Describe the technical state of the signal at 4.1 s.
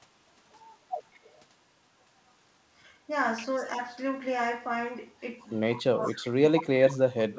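At 4.1 s the speech is intact, with no fault at that moment, and the sound carries only the usual character of the call path, whose band stops at 8 kHz.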